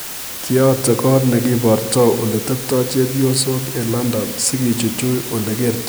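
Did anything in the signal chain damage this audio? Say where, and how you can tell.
Yes. The damage happened at sample-format conversion. The speech was reduced to low bit depth with dither, at 5 bits. A constant, even hiss runs under the speech from start to finish. It sits only about 10 dB below the speech level. There is no crunchy or gritty distortion that tracks the speech. Dither was added before each sample was rounded to so few levels. That turned the rounding error into steady broadband noise instead of distortion.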